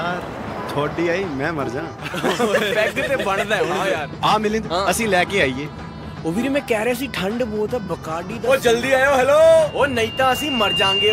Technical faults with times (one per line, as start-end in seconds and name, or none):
9.66-11.13 loudspeaker feedback squeal